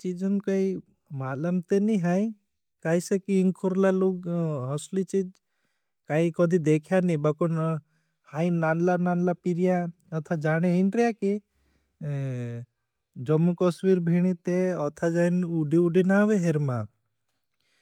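Nothing technically wrong turns up in this speech recording; it just runs along with no faults to point at anywhere.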